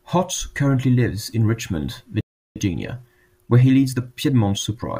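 At 2.21 s the speech cuts out abruptly in mid-flow and the output stays silent for about 0.35 s, resuming at 2.56 s. The sound simply halts and then carries on. This is a playback stall. The likely cause is that the player's buffer ran dry, or its audio thread was briefly blocked, so it had nothing to send to the output until data arrived again.

From 2.56 s to 4.84 s the speech runs hurried, about 1.15 times normal speed, yet the pitch stays where it was. This is time-compressed catch-up. Having fallen behind during the stall, the player trims its backlog by dropping short slices of audio and cross-fading across the joins.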